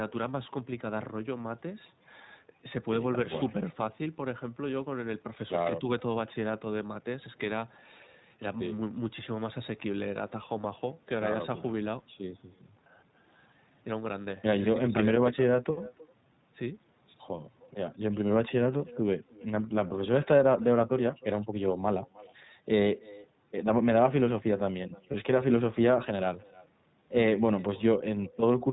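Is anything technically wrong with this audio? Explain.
Yes, there are three problems in this speech clip: an uncancelled echo, narrowband codec coloration, and two brief dropouts.

The echo with no canceller runs throughout. The far end appears to be playing the call over a loudspeaker, and its microphone picks that playback up. Because nothing subtracts it, the talker's own speech returns after a network round trip of roughly a third of a second, about 23 dB below the direct signal. It sounds like a faint, hollow shadow trailing each phrase. A waveform shows a small smeared copy after every burst of speech. A spectrogram shows faint repeated syllable patterns offset to the right.

The iLBC codec is also audible throughout. It codes every 20 ms frame independently and carries nothing above 4 kHz. The damage is plain: speech sounds rough and somewhat synthetic, with a muffled, telephone-like top end, which fits the 15.2 kbps mode. 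On a spectrogram, energy stops sharply at a 4 kHz ceiling, and the harmonics look slightly grainy and blocky in time.

Lost iLBC frames cause two dropouts, at 10.62–10.65 s and 25.12–25.15 s. Each covers about 20 ms, which fits a single lost frame. The decoder fills the gap by repeating the last pitch cycle mixed with noise, so each spot sounds like a tiny held, buzzy blip. The speech recovers almost immediately because each iLBC frame stands on its own. A spectrogram shows a short stretch of flat, frozen harmonics. A waveform shows a brief, overly regular repeating cycle.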